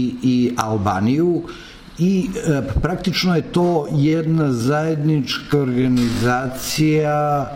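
A time-stretched section runs from 3.80 s to the end at 7.56 s, where the pace suddenly drops to about 0.57 times normal speed while the pitch stays where it was. This is likely the work of software lengthening that stretch to fill a set duration, holding pitch steady by repeating short slices of the waveform. The slowed part drags.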